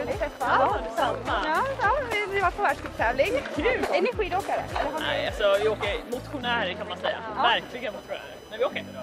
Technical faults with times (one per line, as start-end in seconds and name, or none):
0.00-9.03 computer activity noise